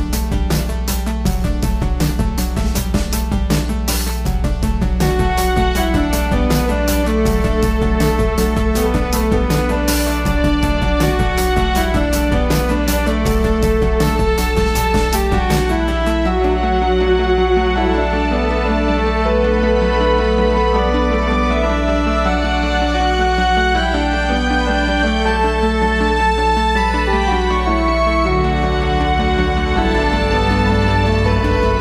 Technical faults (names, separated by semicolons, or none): mains hum